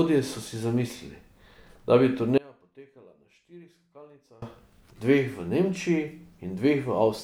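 Audio dropout to a faint residue runs from 2.38 to 4.42 s in this speech clip, about 2 s of lost signal. The speech cuts out abruptly mid-flow rather than pausing or fading, and the gap is not silent: a faint leak of the sound remains, roughly 25 dB below its normal level. That points to the wanted signal likely being interrupted upstream while the path after the break stayed live and kept passing a weak trace through.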